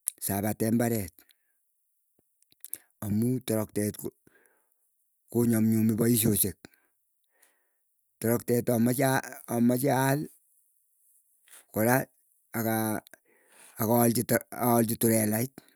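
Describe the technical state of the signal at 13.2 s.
At 13.2 s the signal is intact, with no audible fault at that moment.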